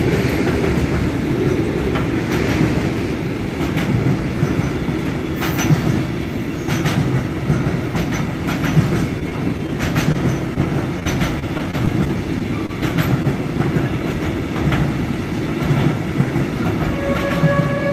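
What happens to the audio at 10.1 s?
At 10.12 to 10.16 s there is a short concealed packet loss: roughly 20 ms of audio never arrived, and the receiver patched about 24 ms by extending the preceding sound and crossfading back into the real signal. It comes across as a brief smear or wobble. On a spectrogram the harmonics or noise texture just run on, unnaturally steady, then rejoin; the waveform shows a soft seam at each end.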